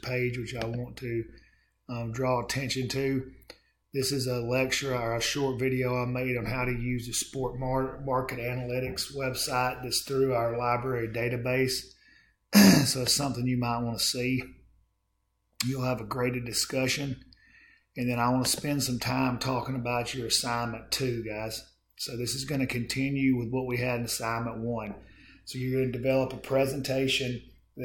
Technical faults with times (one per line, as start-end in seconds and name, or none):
none